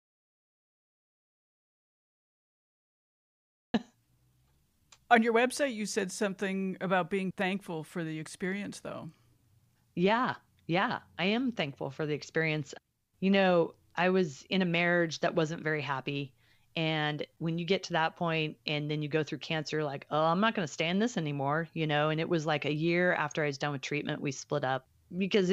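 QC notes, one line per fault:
0.00 to 3.74 s, audio dropout to silence. The clip opens in dead silence, already under way from the first sample. There is no room tone and no noise floor. Speech then begins abruptly at 3.74 s, cutting in mid-flow rather than rising from quiet. The likely cause is a lost input, such as a disconnected device, failed link or stray mute, while recording carried on. Whatever preceded it is gone.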